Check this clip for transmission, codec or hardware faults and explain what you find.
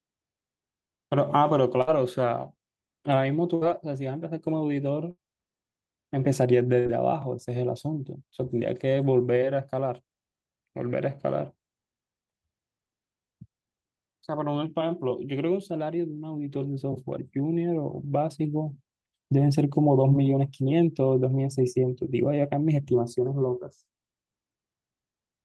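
There are four short dropouts in the first seven seconds of this speech clip. The call path behind them sounds like Opus at a setting consistent with about 48 kbps, with the top end cut off at 12 kHz.

Burst of packet loss at 1.81 to 1.90 s, 3.55 to 3.64 s, 5.11 to 5.20 s and 6.79 to 6.88 s: each time, a run of audio never arrived in time. The receiver filled roughly 60 ms by stretching the last sound and fading it, so it comes out as a held buzz or dying hiss. The speech then picks up about 60 ms further on, with that stretch missing.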